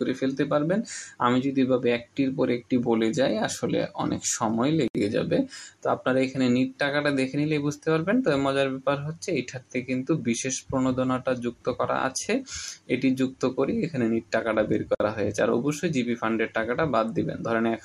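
At 4.88 s and again at 14.95 s, roughly 10 s apart, the audio drops into a gap at a join of encoded pieces, lasting 69 ms and then 54 ms. Separately encoded segments were joined untrimmed, leaving encoder delay and end padding. Edges are smeared by the codec, and the sound resumes where it stopped.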